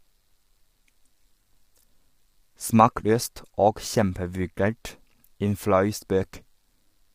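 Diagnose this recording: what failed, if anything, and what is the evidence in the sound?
Codec stage, present across the whole speech clip: the voice is rough and grainy, with noise filling the gaps between pitch harmonics and a top band that sounds thinned and somewhat synthetic. The cause is likely low-delay AAC compression of the AAC-ELD kind, at a rate that fits about 32 kbps. Its short frames resolve harmonics poorly, and at this low rate bits run short. Unlike packet loss, the damage is constant, with no dropouts or repeated fragments.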